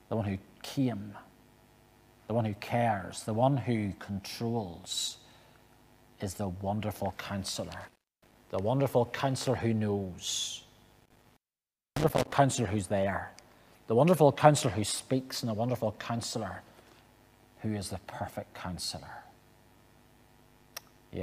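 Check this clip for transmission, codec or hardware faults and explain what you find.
There is one hardware fault, an intermittent contact, heard twice. From 7.81 to 8.35 s the signal is open for about 280 ms. From 11.00 to 12.33 s it is open for about 600 ms. A loose plug or cable briefly breaks the connection. The sound cuts out with crackle at each edge, and faint hiss remains while the line is open. That crackle and leftover hiss set it apart from a codec dropout, which gives clean digital silence.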